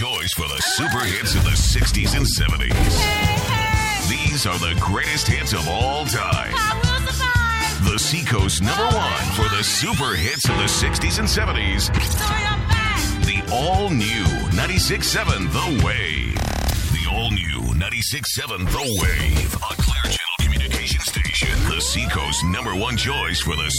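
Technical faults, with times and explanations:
No technical faults can be heard in the signal, which holds steady from its first moment to its last.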